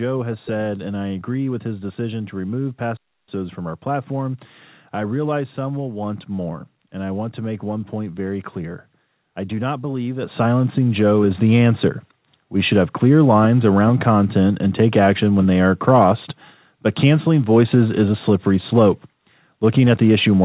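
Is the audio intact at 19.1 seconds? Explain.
Yes, the speech at 19.1 seconds is intact, with no fault at that moment.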